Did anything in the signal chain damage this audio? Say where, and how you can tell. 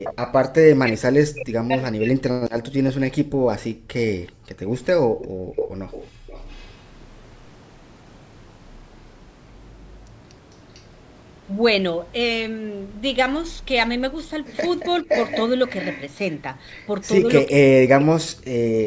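Yes. The damage happens in the call processing stage, at the echo canceller on the far end's loudspeaker side, and it shows up in three ways.

The echo leak is a delayed copy of the speech that returns at a fixed lag. It appears at 0.04–0.32 s with a lag of 389 ms, at 4.26–6.77 s with 449 ms, at 10.74–10.82 s with 449 ms, and at 15.08–16.02 s with 517 ms. Its level ranges from very faint, around 35 dB down, to nearly as loud as the speech itself. It is not room reverb, because reverb decays smoothly, while this is a discrete repeat hundreds of milliseconds late. The likely cause is residual echo that the canceller failed to subtract.

Speech suppressed in double talk appears where the talker's own level drops while the other side is speaking. At 0.61–2.23 s it falls by roughly 40 dB, affecting about one and a half seconds. At 15.03–15.09 s there is a brief dip of about 10 dB. At 17.21–18.63 s there is another drop of about 40 dB, lasting around a second in total. 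The likely mechanism is the canceller attenuating everything because it could not separate the near talker from the loudspeaker echo.

The background is gated by the echo canceller between 3.24 and 6.27 s. Here the room sound, not the speech, drops by as much as 40 dB, for about one and a half seconds in total, while the loudspeaker plays and the leak at 4.26 s begins. The suppressor clamps the microphone and then releases it. This differs from the double-talk losses because the noise floor vanishes and returns, rather than the speech breaking up.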